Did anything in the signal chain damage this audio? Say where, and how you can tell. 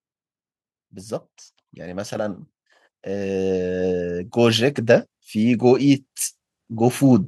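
Yes. The call processing's automatic gain rising: from 3.02 to 6.06 s speech and background swell together by about 13 dB as the AGC gradually lifts gain on quiet input.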